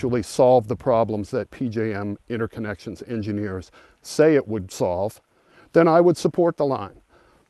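No technical faults can be heard anywhere in this audio.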